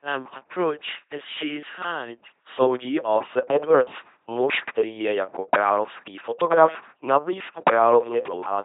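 Speech clip, heavily damaged throughout by an LPC-10 vocoder. It sounds buzzy and robotic, with nothing above 3.8 kHz. That fits 2.4 kbit/s coding.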